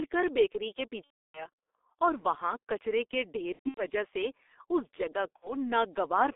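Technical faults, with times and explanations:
Throughout: G.723.1 codec, running at 6.3 kbit/s over a line band of roughly 300 Hz to 3.6 kHz. The damage is heavy. The speech sounds muffled and hoarse and consonants smear, because the codec drops everything above the band and only updates its voice model slowly across 30 ms frames.
1.04–1.49 s: VoIP packet loss concealed by the speech codec, right after "کر بیکری کے". About 300 ms is missing, which fits ten lost frames. The decoder stretches its last pitch and filter into a fading sound for the first couple of frames, then mutes from the third lost frame on, and it takes a moment to recover before "اور وہاں کچرے کے".
3.54–3.85 s: the same packet loss concealment again, after "وہاں کچرے کے ڈھیر". This time the gaps are scattered, totalling about 210 ms, with the longest stretch 120 ms. You hear broken patches, and the voice stays weak until "سے اس جگہ".
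5.36–5.51 s: one more short concealed loss just after "سے اس جگہ". Only about 60 ms is gone, consistent with two frames. The decoder fills the gap with a brief, fading smear, and the voice sounds weak until the decoder catches up.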